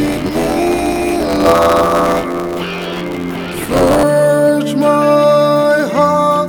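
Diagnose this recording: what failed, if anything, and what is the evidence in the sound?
Buffer tearing at the driver/buffer stage, 0 to 4.04 s: an 86.1 Hz robotic rattle, fitting a 512-sample buffer, splices in older audio. Unlike hum, it stops without signal.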